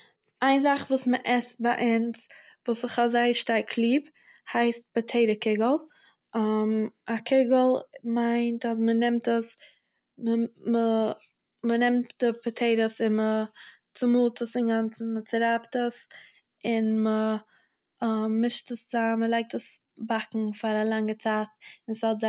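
No technical faults here.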